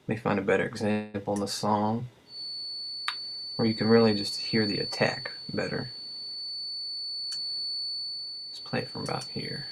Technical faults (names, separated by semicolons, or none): call audio freeze; feedback whistle; jitter buffer speed-up